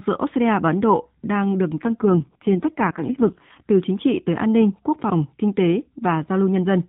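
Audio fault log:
1.82 to 3.66 s, AMR rate drop: the voice gets buzzier and more synthetic, though the bandwidth holds. That fits the mobile codec stepping down from 12.2 to about 4.75 kbps before recovering.
5.04 to 5.12 s, chunks out of order: there's a brief jumbled moment. That sounds like a 20 ms chunk that arrived late and played roughly three chunks after where it belonged.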